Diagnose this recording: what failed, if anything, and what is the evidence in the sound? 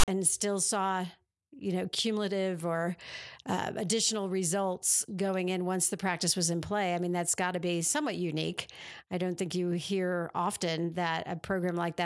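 The speech clip opens with a harsh, hard-edged burst from 0.00 to 0.08 s: a loud, lopsided rasp, as if pushed toward one polarity, then dropping abruptly to dead silence before the speech begins. This is file tags played as audio, a storage and playback parsing failure. The player treated the file's metadata block as sample data. The text bytes became the offset rasp, and the zero padding behind them became the silent stretch.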